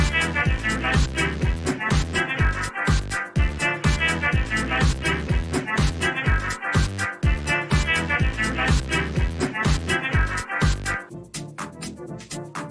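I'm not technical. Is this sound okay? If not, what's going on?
Yes, it's fine; nothing wrong can be heard.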